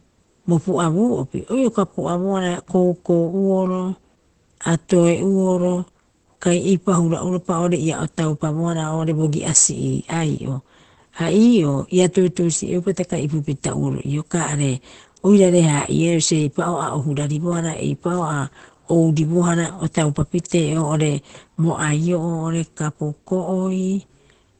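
Speech with heavy Opus compression throughout: it sounds muffled and hoarse, with nothing above 8.4 kHz, likely from the codec's speech mode at a very low bitrate, around 12 kbps. A spectrogram shows a hard ceiling at 8.4 kHz.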